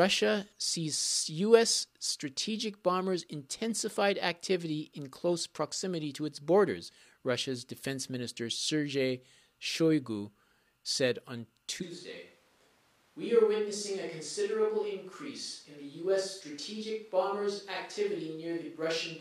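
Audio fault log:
11.84 s to end, switch to a distant microphone: right after "said on" the sound turns abruptly roomy and hollow, thinner in the bass, roughly 5 dB quieter, with room noise about 35 dB below the speech, likely a fallback to a camera or room mic. Unlike a plain gain drop or added reverb, tone, level and noise change together in one instant.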